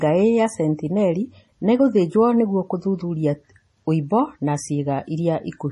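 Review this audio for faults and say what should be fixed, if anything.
Throughout the speech, the sound is watery and swirly, with a hard treble ceiling at 11.5 kHz. This is likely heavy MP3 compression, consistent with a bitrate near 32 kbps. Starved of bits, the encoder dropped the top band and switched weak frequency lines on and off between frames. To prevent it, keep a lossless master and encode at a much higher bitrate.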